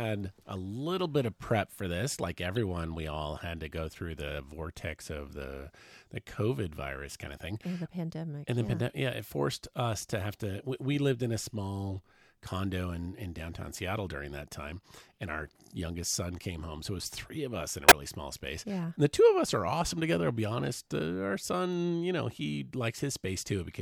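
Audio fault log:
2.56 s, corrupt frame decoded: a quiet little glitch just before "we all had to". Damaged bits got decoded as if valid, so misread gains and codes dropped energy at the wrong frequencies. It lasts about as long as a couple of frames.
17.88–17.92 s, corrupt frame decoded: same thing between "of us in a" and "small space", but a much louder glitch.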